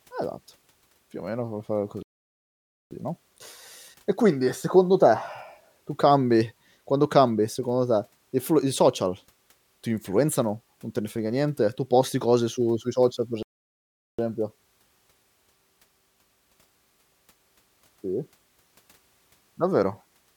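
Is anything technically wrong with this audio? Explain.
Yes, there are two playback stalls in this speech. After "o meno come fare" the audio cuts to silence from 2.03 to 2.91 s, and after "su sui social per" it cuts out again from 13.43 to 14.19 s. Both gaps run about 0.8 s, likely because the player ran short of data, and the speech then picks up again.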